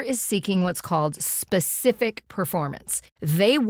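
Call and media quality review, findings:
Lost packet rebuilt from error correction, 0.53 to 0.71 s: no gap, but speech turns rougher and noisier for about 100 ms, which fits five separate 20 ms packets. Jitter buffer/decoder played the low-bitrate Opus FEC copies carried in each following packet. Same fault at 2.17 s: one brief rough frame, about 20 ms, consistent with a single lost packet recovered from the next packet's in-band copy.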